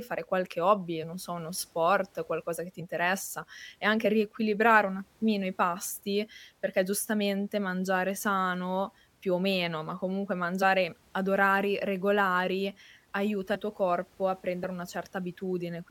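The speech jumps forward seven times where compressed frames were skipped: at 1.02 s, 2.79–2.82 s after "sport qualcosa che ti", 4.04–4.07 s, 8.15–8.19 s, 10.61–10.64 s before "ad orari regolari aiuta", 13.54–13.56 s and 14.61–14.65 s. Whole frames never reach the output, so roughly 20 ms of audio vanishes at most points, about 50 ms at 2.79 s and about 70 ms at 13.54 s.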